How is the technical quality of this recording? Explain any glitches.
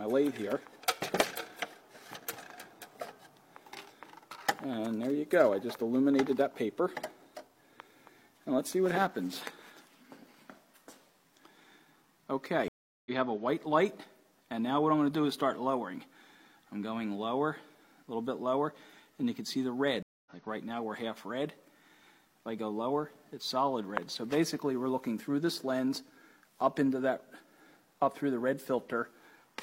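Two brief dropouts mar the recording. At 12.68–13.11 s the audio cuts out for about 377 ms, and at 20.02–20.31 s for about 234 ms. Each time it resumes slightly ahead, skipping roughly 0.4 s and then 0.2 s. This is a stream reconnect: the connection dropped and the player restarted decoding mid-stream.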